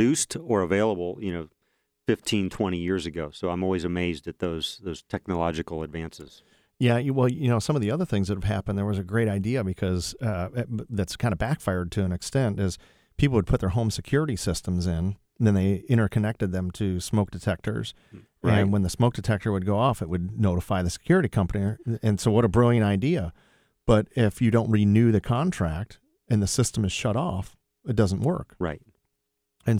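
At 26.65 s, right after "the contract and the", there's a block of digital silence: about 0.73 ms of the speech drops out to silence, which fits a 32-sample block left unfilled. With no fade in or out, it's heard as a sharp tick before "is shut off it".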